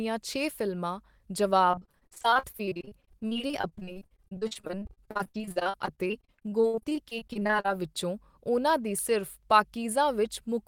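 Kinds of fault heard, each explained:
Repeated packet loss (robotic sound): Between 1.71 and 7.69 s, dropouts up to 62 ms keep recurring. Each is patched by stretching the last sound, giving choppy speech with pieces missing.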